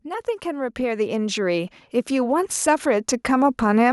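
A speech recording with automatic gain rising from 0.05 s through to the end at about 3.9 s. The level climbs steadily by about 14 dB over that span, and the background noise floor swells along with the voice rather than staying put. That joint rise is the giveaway: an automatic gain control judged the input too quiet and kept raising its gain gradually, lifting everything in the signal path together instead of just the talker.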